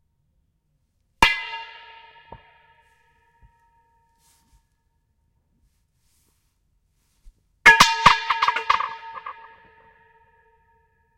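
Dropped samples at 8.31 s produce one sharp click in this recording of sounds. A couple of samples, a tiny fraction of a millisecond, likely went missing, so the waveform jumps abruptly to a later value. No sound is lost; only that sudden step is heard.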